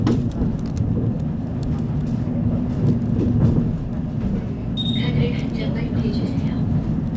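No technical faults are audible.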